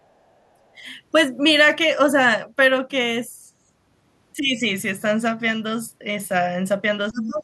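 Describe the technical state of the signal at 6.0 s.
At 6.0 s the speech signal is intact, with no audible fault at that moment.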